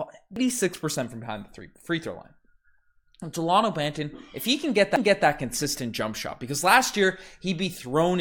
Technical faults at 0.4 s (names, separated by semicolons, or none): CD skip